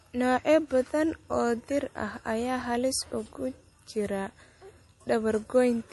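From start to finish the speech has a hard ceiling at 11.5 kHz with nothing above it, plus plainly audible smearing and a watery, swirly texture, all pointing to likely MP3 compression at a low bitrate, something like 48 kbps, where the encoder drops treble and weak detail.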